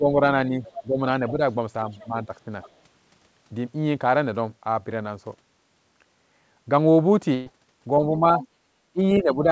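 This is speech over a call, with nothing above 8 kHz, which fits a wideband codec like G.722, and it shows echo-control trouble. From the start to 1.4 s the talker keeps dipping by something like 10 dB, about half a second of it in total, and again from 2.04 to 2.31 s and from 8.02 s to the end. That's speech suppressed in double talk: the likely cause is the echo canceller hearing the far side over the loudspeaker at the same time and turning everything down because it can't tell the two apart. Tangled up with that, there's the other side's voice leaking through underneath. It runs from 0.63 to 1.31 s at roughly 15 dB below the talker, then in quick scraps at 1.92 to 2.05 s (very faint, around 30 dB down), 2.62 to 2.70 s (around 25 dB down) and 8.39 to 8.48 s (around 20 dB down). It's likely residual echo the canceller didn't fully scrub out of the mic. Then at 7.34 to 7.49 s there's a burst of packet loss. 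About 120 ms of audio is gone, and the receiver papers over it by stretching and fading the last bit of sound for roughly 120 ms, so you get a brief held, fading smear before the speech picks up again a little further on.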